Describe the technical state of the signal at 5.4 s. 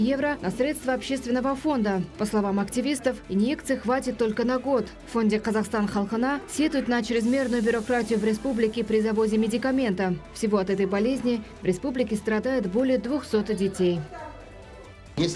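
At 5.4 s the signal is intact, with no dropout, distortion, glitch or other technical fault present at that moment.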